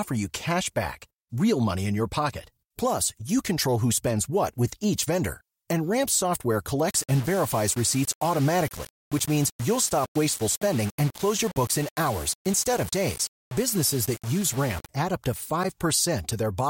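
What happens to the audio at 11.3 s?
The speech turns grainy and gritty from 6.89 s to 14.89 s, ending just before "add up to". This is low bit depth without dither: the samples are likely rounded to very few levels, which fits a 5-bit word, with no added noise to randomise the error. The distortion tracks the speech, sitting only about 15 dB below it, so quiet stretches sound rough and sputtery rather than smoothly hissy.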